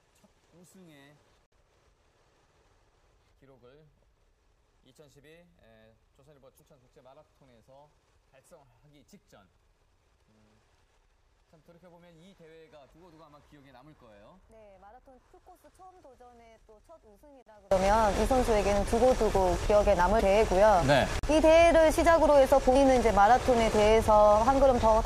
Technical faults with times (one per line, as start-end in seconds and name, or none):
0.00-17.71 one channel inverted
1.46-1.52 block of digital silence
6.57-6.60 damaged data in a compressed stream
17.42-17.46 block of digital silence
20.17-20.21 damaged data in a compressed stream
21.19-21.23 block of digital silence
22.72-22.76 damaged data in a compressed stream